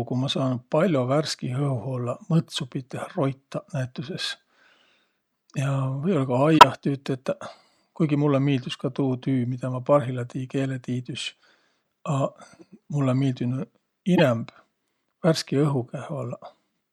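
Flipped bits in compressed frames of this speech recording were decoded anyway, a corrupt frame decoded fault. Misread gains and codes throw energy to wrong frequencies, heard as a near full-scale error at 6.51–6.64 s and a quieter one at 14.16–14.23 s, each spanning several frames.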